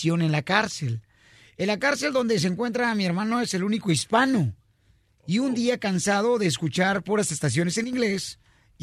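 At 4.00 s there is a block of digital silence lasting about 2.9 ms, which fits a 128-sample buffer. The output stopped carrying the speech for that span and resumed with no fade in or out. The cause is either a program that failed to refill its output buffer in time or a calculation that produced invalid values replaced by zeros. At under 3 ms the hole is too short to register as silence and comes across as a tick or dip.

From 7.84 s to 7.93 s, for roughly 94 ms, the level of the speech falls abruptly by about 6 dB and then returns to its previous level. Apart from the drop in loudness, the sound is unchanged during that stretch. The likely cause is one channel dropping out: with the same sound on both channels, losing one halves the signal in the mono sum, producing exactly this 6 dB step down and back.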